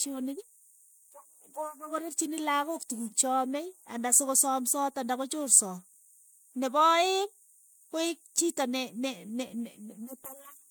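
No technical faults can be heard anywhere in the recording. Nothing in the audio calls for a time or a description.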